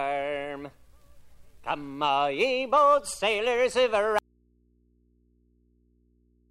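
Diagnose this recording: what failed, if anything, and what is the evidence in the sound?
An audio dropout to a faint residue begins abruptly at 4.19 s and lasts to the end. The wanted sound vanishes. Only mains hum remains, about 40 dB below the signal. The path stayed live, so the likely cause is a broken analogue connection leaving an open input.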